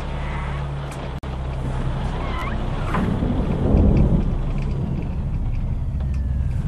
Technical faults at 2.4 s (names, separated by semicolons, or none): repeated buffer